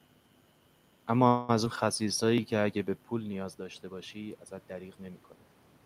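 From 1.27 to 1.51 s a call audio freeze stretches the last sound into a fading buzz for about 0.21 s, likely from delayed packets draining the jitter buffer; nothing is lost.

At 1.65 to 1.68 s playback skips ahead, dropping roughly a tenth of a second of speech and splicing the two sides almost directly together.

From 1.84 to 2.79 s a jitter buffer slow-down repeats pitch periods, adding 93 ms and running speech at 91% speed with unchanged pitch and drawn-out sounds.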